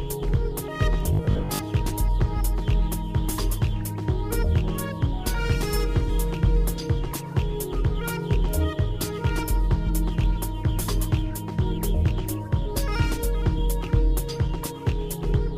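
From 1.03 to 1.61 s, robotic sound, likely from repeated short 20 ms buffers, imposes a rigid 50 Hz buzz; unlike dropouts, nothing goes silent.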